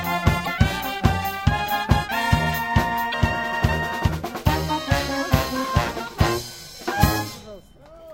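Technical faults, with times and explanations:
0.43–0.48 s, 3.10–3.14 s, 6.81–6.85 s: damaged data in a compressed stream. Each event is a brief chirp or blip of about 43 ms. The decoder misreads corrupted frames and resynchronises at the next header.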